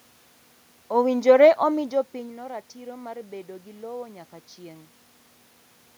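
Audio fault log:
Nothing stood out on listening to this speech clip.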